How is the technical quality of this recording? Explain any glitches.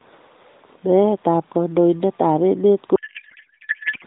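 The recording has one clear glitch near the end: a codec payload misread from 2.96 s to 4.05 s, running almost to the end of the clip. Before that, the speech carries the band-limited, slightly synthetic character of the AMR narrowband mobile codec, with nothing above 4 kHz and only light coding damage, which fits the 12.2 kbps mode.

From 2.96 s the decoder is reading the packets with the wrong bit layout. The pattern fits octet-aligned AMR frames being parsed as bandwidth-efficient ones, so every parameter field lands in the wrong position. The frames still decode as valid, but the pulses and filter values are nonsense. The speech is replaced by garbled noise and warbling that barely tracks it, and this lasts until 4.05 s.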